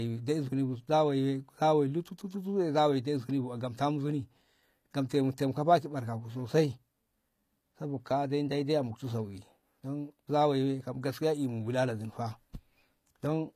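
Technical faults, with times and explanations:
Throughout: HE-AAC compression. The speech has clearly audible codec damage, and nothing reaches above 14.9 kHz. The upper band sounds synthetic. S sounds come out gritty and metallic. The likely cause is HE-AAC at a low bitrate, around 24 kbps. That codec encodes only the lower spectrum. It rebuilds the treble by copying lower bands upward under a coarse envelope. The copied harmonics do not line up with the real ones.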